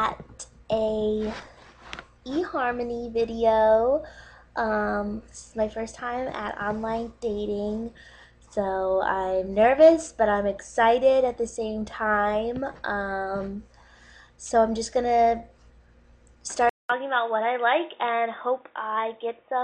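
From 16.69 s to the end, the sound drops out for about 200 ms, then returns dull and quieter with faint new background noise, nothing above 3.8 kHz, likely an input switched to a poorer device.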